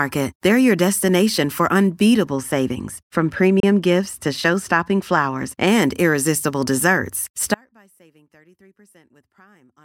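A short speech recording with three separate problems. From 2.28 to 5.67 s the top end goes soft and muffled, the classic sound of de-emphasis applied wrongly. A treble-cut stage meant to undo pre-emphasis ran on audio that never had any boost, or ran twice, so the response rolls off smoothly, down about 11 dB at 10 kHz relative to 1 kHz. Consonants lose their edge and the whole stretch sounds dull. Inside that muffled section, at 3.60 s, there's a brief hole of about 29 ms where the audio goes silent and then picks up as if it had kept playing. That gap length fits a couple of packets going missing, so the likely cause is a Bluetooth dropout, with the link to the headphones failing to deliver data in time and the output playing nothing until good packets came back. Then at 7.55 s the sound cuts out abruptly and stays out to the end of the clip. What's left is a faint leak of the signal, roughly 35 dB below normal level. 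That's an audio dropout to a faint residue, not a pause or a fade: the wanted signal was lost while the path after the break stayed live, likely a failed source or connection upstream.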